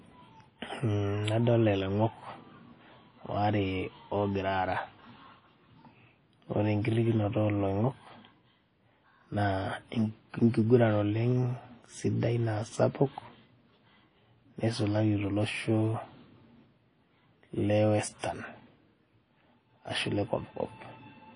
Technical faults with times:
0.00-21.36 WMA compression

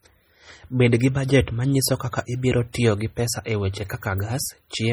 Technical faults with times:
0.00-4.92 MP3 compression
2.73 pre-echo

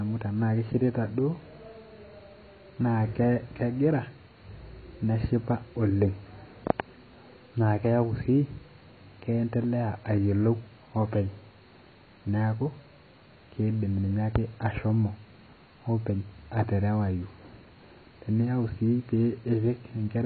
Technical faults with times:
0.00-20.26 AAC compression

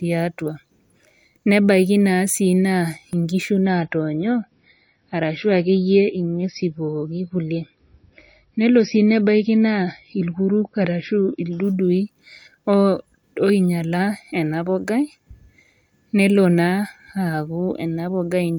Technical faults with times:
3.13 dropped buffer (overrun)
3.64-11.64 adaptive stream at a lower bitrate

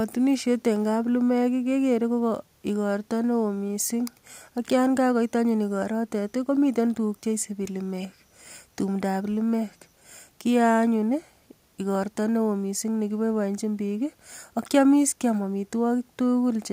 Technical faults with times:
none

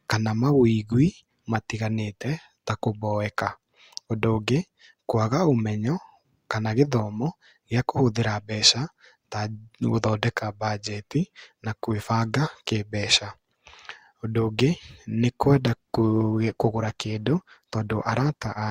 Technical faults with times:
15.53-18.70 adaptive stream at a lower bitrate

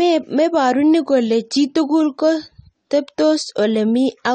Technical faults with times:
0.00-4.34 AAC compression

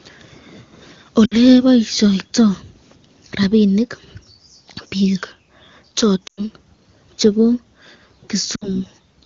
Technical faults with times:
1.25-1.36 lost AMR speech frames
6.27-6.41 lost AMR speech frames
8.55-8.67 lost AMR speech frames

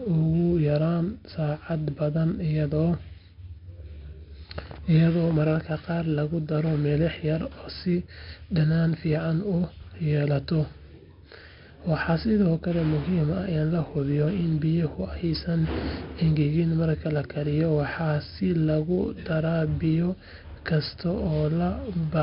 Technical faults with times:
0.00-22.23 4-bit ADPCM compression

